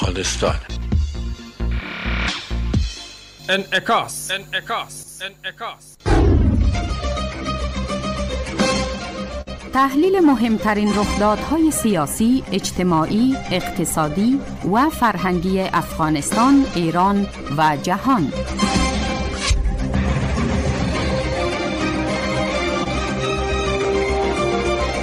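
At 9.41 to 9.49 s there is a burst of packet loss. About 60 ms never arrived, so the receiver stretched the last sound, faded it, then skipped ahead.

At 22.84 s comes a short concealed packet loss. Roughly 20 ms went missing and was patched from the preceding audio, leaving a brief smear before it rejoins.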